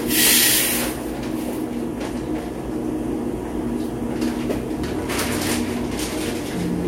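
Everyday sounds, no audible faults.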